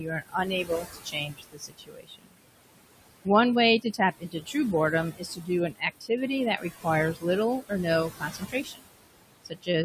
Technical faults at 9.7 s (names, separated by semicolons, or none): noise suppressor artifacts; speech cut by the noise suppressor